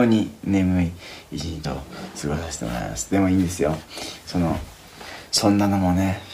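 At 1.56 to 1.65 s and again at 5.18 to 5.46 s, the sound lurches forward, losing about a tenth of a second each time. These are compressed frames skipped: whole blocks of encoded audio were missing or rejected as damaged by the decoder, so playback leapt ahead.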